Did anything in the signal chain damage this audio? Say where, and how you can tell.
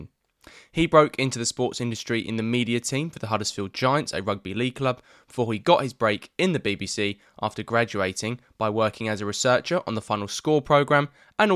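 No, nothing in the signal chain stood out as damaging this speech on listening.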